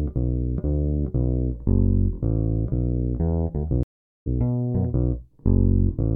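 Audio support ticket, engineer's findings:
Stream reconnect, 3.83–4.27 s. Audio drops out for about 0.43 s, then resumes roughly a fifth of a second further on. Connection break, player reconnects, fresh decoder mid-stream. Skipped-ahead restart, not a dropout resuming in place.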